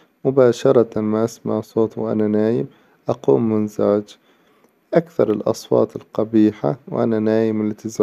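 Nothing in the speech stood out as a technical problem on listening.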